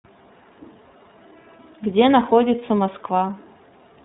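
Throughout, the speech carries iLBC codec coding: nothing passes above about 3.9 kHz, and each frame's excitation is coded independently, leaving a plainly rough, synthetic grain that fits 30 ms frames at 13.33 kbps. A plain band limit would dull the sound without adding that roughness.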